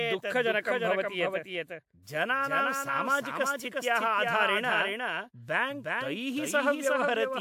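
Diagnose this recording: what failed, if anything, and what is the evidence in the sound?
A doubled audio track runs throughout the speech: a full-band copy trails by around 400 ms, roughly 5 dB quieter, with no decay or room colour. The likely cause is a second, slower capture path or an edit holding two offset copies.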